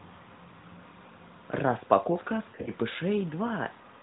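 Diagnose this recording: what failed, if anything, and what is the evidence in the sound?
Network stage: lost AMR speech frames from 2.50 to 2.70 s. Brief dips and warbles are scattered over 160 ms, with the longest gap about 40 ms. The decoder concealed each gap by repeating the last good parameters at falling gain.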